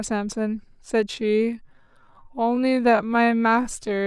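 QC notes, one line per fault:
1.07–4.07 s, time-stretched section: the speech abruptly slows to about 0.62x speed with pitch unchanged, sounding dragged, likely from software repeating short pieces.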